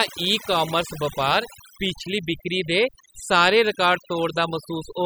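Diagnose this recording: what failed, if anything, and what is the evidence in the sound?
Overdone noise removal, at the call-processing stage, runs through the whole speech recording. The background between phrases drops to near silence, broken by twinkling specks. The suppressor's attenuation is set so hard that any frequency band sitting close to its noise estimate gets pulled down or shut off, and the quieter parts of the voice are removed with it. A spectrogram would show isolated flickering dots and fragmented, patchy harmonics.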